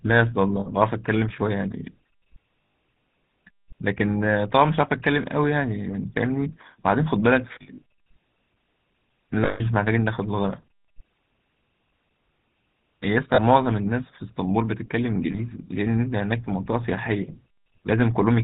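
Speech, coded throughout with the GSM full-rate codec, which fits a 13 kbps full-rate coder. Band-limiting to 4 kHz and the regular-pulse excitation leave a plainly audible buzzy, gravelly roughness on the voice. Lost GSM frames occur at 0.60 s (60 ms), 2.62 s (120 ms), 7.62 s (losses scattered over 200 ms, longest run around 70 ms), 9.44 s (160 ms), 13.34 s (40 ms) and 15.32 s (20 ms). Each gap is concealed by repeating the last good frame, producing a brief rough, metallic ring.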